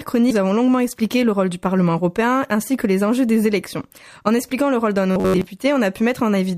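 At 0.30 s there's a skip ahead: roughly a fifth of a second of audio got dropped, whether lost in transit or discarded by an overflowing jitter buffer, and playback just leaps past it with no filler, so the two sides butt straight together.

From 0.93 to 1.50 s you get a jitter buffer speed-up. The buffer was holding more than it wanted, so it shaved off tiny pitch-period slices over and over, around 70 ms in all. That runs the sound about 110% fast at unchanged pitch, so it feels a bit rushed.

Then from 5.12 to 5.47 s there's robotic sound from repeated short buffers: a stiff, metallic buzz at 93.8 Hz that still loosely tracks the underlying sound. Most of that stretch is repeats, likely the last roughly 10.7 ms chunk being looped because fresh audio wasn't arriving in time.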